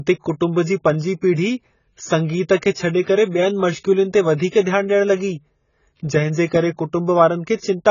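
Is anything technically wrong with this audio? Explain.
Yes, there is one fault. Throughout the speech, likely AAC compression at a very low bitrate (around 16 kbps) quantises coarsely and removes everything above 7 kHz. The spectrogram shows a hard ceiling, and sibilants sound dull, smeared and warbling.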